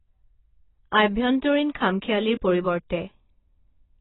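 Throughout, nothing is heard above 3.9 kHz, and sibilants fizz and warble. That smearing, unlike a clean low-pass, is likely heavy AAC compression, fitting roughly 16 kbps.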